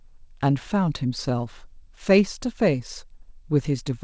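No technical faults can be heard in the speech. It has passed through a call codec and jitter buffer that are working normally, and nothing reaches above 8 kHz, which fits a wideband codec such as G.722 at around 64 kbps.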